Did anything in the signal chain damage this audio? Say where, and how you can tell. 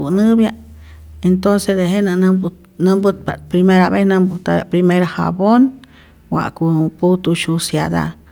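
Yes. From 3.64 to 6.14 s, after "intonce tejenä nämput nämputpa't", a faint inharmonic fizz follows louder, brighter speech. This is crude rate conversion, a sample-format stage using unfiltered linear interpolation, consistent with 44.1 kHz to 48 kHz.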